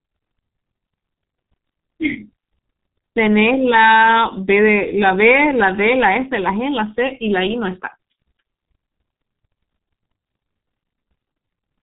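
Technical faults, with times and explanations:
Throughout, G.723.1 codec: the speech was squeezed through an early telephony codec, with heavy damage consistent with a rate near 6 kbit/s. Nothing above 3.8 kHz survives, and its slowly updated voice model smears consonants, leaving the speech muffled and hoarse.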